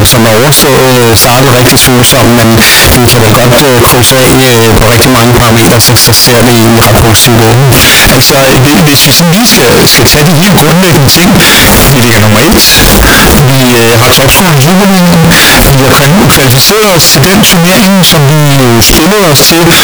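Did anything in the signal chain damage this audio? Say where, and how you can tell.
Yes. The speech is wrecked by what is likely a signed and unsigned mix-up at the sample-format conversion stage, persisting for the whole clip. Flipping the top bit of each 16-bit sample turns every zero crossing into a full-scale jump, so the audio is extremely loud, harsh distortion, with pauses as loud as speech. A waveform swings hard between both extremes with sharp vertical steps, and a spectrogram shows dense broadband energy everywhere.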